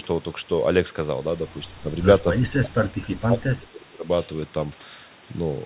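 Speech suppressed in double talk, at 1.69 to 1.9 s and again at 2.64 to 4.05 s: the speech briefly sinks by about 10 dB, then during the longer stretch drops by as much as about 25 dB, thinning and breaking up. The likely cause is an echo canceller that, with both ends talking, mistook the near talker for loudspeaker echo and attenuated it along with the echo. Throughout, the sound stays band-limited at 4 kHz by the call codec.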